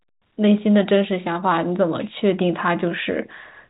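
Speech, with no technical faults to be heard.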